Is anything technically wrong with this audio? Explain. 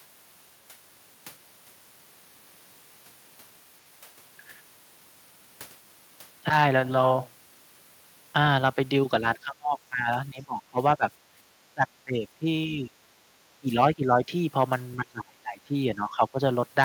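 Yes. The speech dips hard and chops out in pieces from 9.21 to 11.04 s, 11.74 to 12.96 s, 13.61 to 14.32 s and 14.96 to 16.39 s, by up to about 25 dB. That's likely speech suppressed in double talk: the echo canceller mistook the talker for far-end echo and ducked both.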